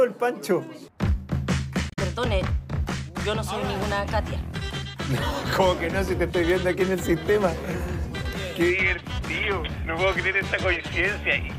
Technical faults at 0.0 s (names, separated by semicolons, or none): none